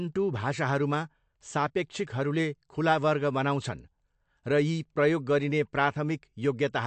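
The speech sounds dull and watery throughout, with nothing above about 8.3 kHz and a swirly, chirpy edge on sibilants. Likely cause is MP3 compression at a low bitrate, which fits roughly 53 kbps, where the encoder trims treble and drops weak frequency lines frame to frame.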